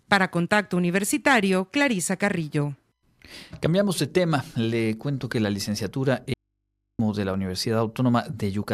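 At 6.34 s the speech cuts out abruptly and returns at 6.99 s, an audio dropout to a faint residue lasting about 0.66 s. The gap holds only mains hum, very roughly 55 dB under the speech, which most likely means the signal was lost while the input stayed open. On a waveform the trace collapses to a thin flat band with sheer edges. A spectrogram shows the speech energy vanishing, leaving steady horizontal hum lines.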